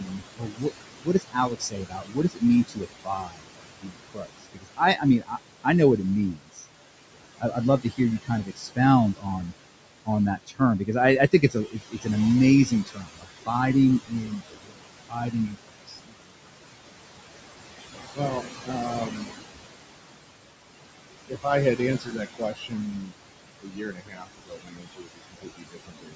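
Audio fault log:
throughout: noise suppressor artifacts. The suppressor pulls down the bands it judges to be steady noise by about 21 dB, frame by frame. The room noise, about 10 dB below the speech, drops away in the gaps and returns under the speech, so the background pumps with the talker.
0.0–6.66 s, 7.39–9.53 s, 10.06–12.07 s, 12.66–13.49 s, 14.07–16.31 s, 18.15–19.28 s, 21.28–26.15 s: speech cut by the noise suppressor. In these spans the suppressor treats parts of the speech as noise and attenuates them with the background, by about 18 to 22 dB at the deepest points. Soft consonants, word endings and quieter stretches sound swallowed or faint. The affected portions add up to roughly 11 s, with the longest losses in the first and last spans.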